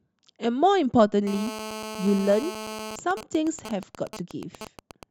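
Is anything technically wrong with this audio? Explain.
Yes. From 1.27 to 2.96 s there is GSM phone buzz. A nearby 2G phone in a call sends bursts at 217 Hz, which the audio circuit rectifies into a steady, raspy buzz about 12 dB below the speech. From 2.99 to 5.03 s come GSM signalling bursts. Its user has gone silent, so the phone sends only short groups of bursts, heard as even ticks with a longer 217 Hz buzz twice a second, roughly 10 dB down, unlike the continuous buzz before.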